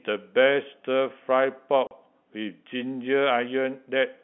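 Speech carried over a G.711 telephone line, band-limited to roughly 200 to 3400 Hz, breaks at 1.87 s with packet loss filled with silence. A 40 ms hole runs to 1.91 s, with hard edges as the waveform drops to silence and resumes abruptly, a length that fits four lost 10 ms packets. Concealment would smear or repeat the previous sound across the gap, but here the gap is true silence with sharp boundaries.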